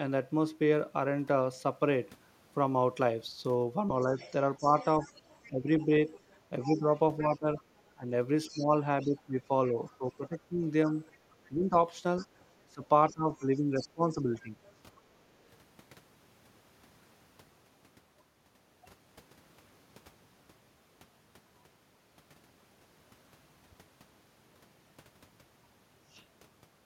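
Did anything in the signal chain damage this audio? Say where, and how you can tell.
Yes, in call processing. The other side's voice leaks through at 4.0–9.96 s and 10.87–14.99 s, about 20 then 30 dB down. The likely cause is the echo canceller missing loudspeaker pickup.

Speech is suppressed in double talk between 4.05 and 14.59 s. The talker dips by up to roughly 15 dB, around 3 s in total, likely from the canceller ducking everything during overlap.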